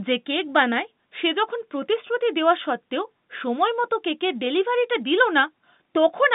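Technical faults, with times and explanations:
No faults found; the speech occupies a band of about 150 Hz to 3.7 kHz, which fits ordinary G.711 mu-law telephone coding at 64 kbps working as intended.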